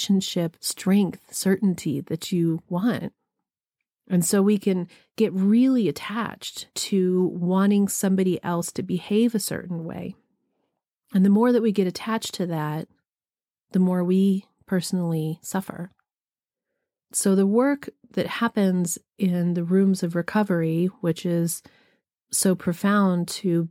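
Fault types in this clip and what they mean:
No technical faults are audible anywhere in the speech.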